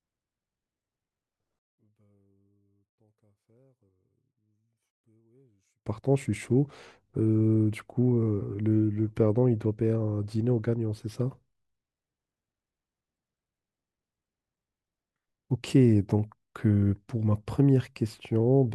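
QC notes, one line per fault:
1.59–5.86 s, one channel inverted: the speech collapses to almost nothing, dropping by about 40 dB when the stereo pair is folded to mono, then returns at full level from 5.86 s. The likely cause is a polarity flip on one side of the pair, so the centred speech present in both channels cancels on summing. With the two sides nearly identical, only their tiny difference survives, leaving a faint trace of the speech until the polarity comes back into agreement.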